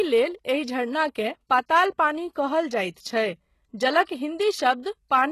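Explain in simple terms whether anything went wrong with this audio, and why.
Throughout the speech, s sounds come out gritty and metallic, and nothing is present above 12.3 kHz, likely from HE-AAC compression, which rebuilds the treble from lower sounds rather than simply muffling it. From 4.04 to 4.09 s, a short hiss arrives about 56 ms before a sharp sound. That is pre-echo: it comes before the attack, not after it as an echo would.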